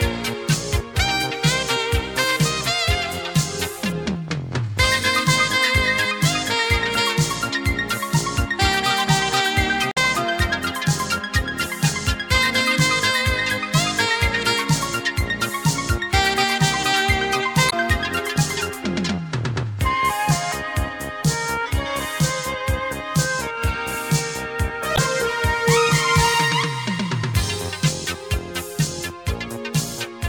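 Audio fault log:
9.90–9.99 s, 17.67–17.73 s, 24.94–24.99 s: damaged data in a compressed stream. Three short blips of roughly 50 to 85 ms each, where bad bytes in the stream throw the decoder off. It loses sync and hunts for the next frame header, which briefly garbles the sound.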